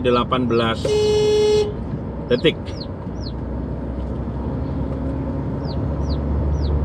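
No technical faults are audible.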